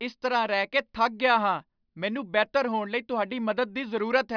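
No technical faults can be heard anywhere in this recording of speech. Nothing at any moment suggests a break, glitch or failure in how the audio was captured or carried.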